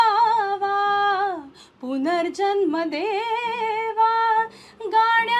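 Nothing in the recording stood out as a technical problem on listening.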